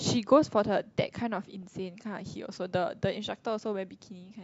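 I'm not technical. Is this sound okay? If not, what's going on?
No. At 1.63 s you hear DAB burbling. Weak digital radio reception let errors slip through, so the speech briefly burbles with short blips of noise.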